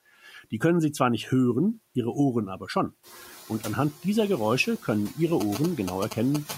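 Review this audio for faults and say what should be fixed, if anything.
Noise suppressor artifacts run through the whole recording. The suppressor pulls down the bands it classifies as steady noise by about 12 dB, re-deciding each frame, so the background dips in the gaps and comes back up underneath the speech. The gating is more obvious after about 3 s, when the room noise steps up by about 11 dB while still sitting about 19 dB under the speech.

Speech cut by the noise suppressor occurs between 0.23 and 0.61 s. Within that stretch, roughly 150 ms of speech is misjudged as noise and attenuated along with the background, by as much as about 12 dB at the deepest point. The affected sounds come across swallowed and faint instead of fully articulated, because the suppressor's estimate of the noise floor overlaps the quieter speech energy there.

GSM signalling bursts appear from 5.41 to 6.51 s as a galloping dit-dit-dit of short buzzes at 217 Hz, only a little below the speech level. 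A nearby 2G handset is transmitting bursts while signalling, and the audio circuitry rectifies that RF into the audible band.

To prevent these, soften the suppressor's attenuation and tighten its speech detection, and keep mobile phones away from the microphone and cabling, or use better RF filtering.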